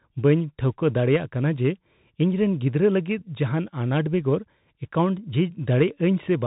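Throughout, the speech carries Bluetooth CVSD headset codec damage: nothing above 3.8 kHz survives, and the one-bit delta coding leaves scratchy sibilants and granular hiss, consistent with a 64 kbps link.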